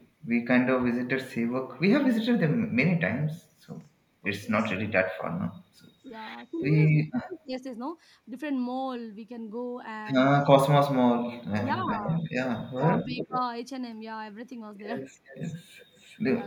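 At 0.00 to 0.07 s there is a faint echo leak: a copy of the sound 252 ms late and about 40 dB down. It is likely residual from an echo canceller on a loudspeaker side and appears as a dim, time-shifted repeat of the harmonic bands. From 6.90 to 7.52 s the speech is suppressed in double talk, likely because the canceller ducked the talker while both sides spoke. The level drops by as much as about 30 dB, leaving a notch in the waveform envelope. A stronger echo leak runs from 11.58 to 13.39 s, delayed 350 ms and only about 15 dB below the speech. It is likely the same canceller failing, and it shows as a clear ghost trace. Within it, speech is also suppressed in double talk, likely as the canceller ducked the talker again, with a slight dip of about 5 dB at 11.82 to 11.88 s and a dip of about 15 dB from 12.71 to 13.33 s. A final echo leak from 15.26 s to the end, again 350 ms late and about 25 dB down, likely from the same residual echo, appears as a fainter repeated trace.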